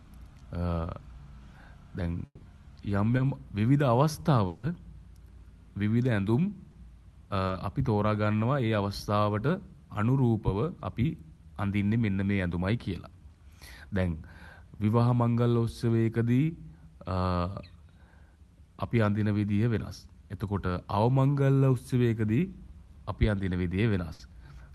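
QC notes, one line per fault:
0.39 s, 3.17 s, 6.71 s and 7.47 s: short concealed packet loss. About 20 ms of audio is missing each time. The receiver bridged each hole by extending the last sound, from its pitch if voiced and as shaped noise if not, then blended back. Each is a brief smear or wobble. The one at 3.17 s falls just before "යම් විවිධ", and the one at 6.71 s comes right after "විවිධ ඇඳුම්".
2.25 s and 4.47 s: long network dropout. Each gap is 0.16 s, and 0.16 s of audio is lost each time. The likely cause is that nothing arrived for that stretch. The receiver carried the last sound on as a fading buzz or hiss. At 2.25 s about 50 ms of silence follows before the audio returns. At 4.47 s the fill runs straight back into the audio. Each time, the audio resumes without the lost part.
24.13 s: burst of packet loss. A 60 ms gap is filled, and 60 ms of audio is missing. Packets were lost or arrived too late to be played. 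The receiver extended the last sound and lowered it as the gap went on, so a voiced sound becomes a held buzz and other sounds a fading hiss. The audio then picks up further on, with the 60 ms in between gone. The Opus call coding around it sounds band-limited at 12 kHz.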